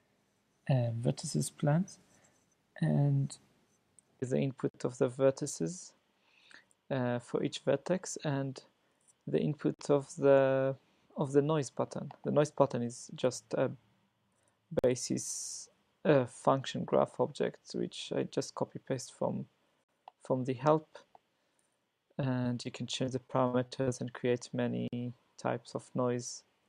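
Gaps between chunks occur at 4.69, 9.74, 14.79 and 19.84 s, and again at 24.88 s. Each is a hard-edged hole of about 48 ms, spaced about 5 s apart. That spacing shows the audio was delivered in 5-second chunks, with dead air inserted at every join, likely from padding or a late start on each chunk. Nothing is removed; the sound simply stops abruptly and resumes on the same beat each time.

Short concealed packet loss follows at 22.21, 22.43 and 22.63 s. In each case about 20 ms of audio failed to arrive in time, which fits one lost 20 ms packet per event. The decoder filled each hole by extending the preceding sound before easing back into the real signal. The result is three quick smears or wobbles, roughly a fifth of a second apart.

Repeated packet loss (robotic sound) runs from 23.05 to 23.89 s. Across those 0.84 s there are five separate dropouts totalling about 200 ms, the longest 64 ms, so roughly a quarter of the span is synthetic fill. 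Each patch extends the last sound, and the next loss arrives before the stream recovers. The stretch turns choppy, with pieces audibly missing.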